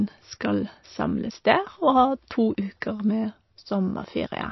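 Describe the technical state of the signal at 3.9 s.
At 3.9 s the speech is still carrying the MP3 compression damage present across the whole clip, likely from an encoder starved of bits, at a rate that points to something near 28 kbps. Short of bits, it cuts all content above 5.8 kHz and drops weak frequency lines that flicker on and off between frames. The result is dull, band-limited speech with a watery, swirling texture, metallic chirps on s sounds, and smeared consonant onsets.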